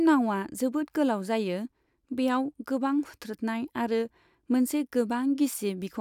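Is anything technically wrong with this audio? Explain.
No, nothing technically wrong is audible in this speech recording.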